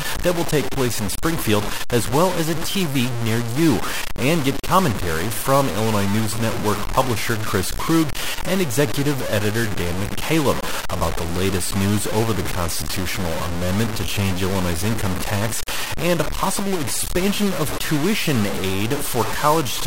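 Speech, and the whole thing is gritty: grainy distortion that tracks the voice, nearly as loud as the signal, with quiet bits sputtering or dropping out. It's likely low bit depth without dither, truncated rather than rounded, which fits roughly 4 bits.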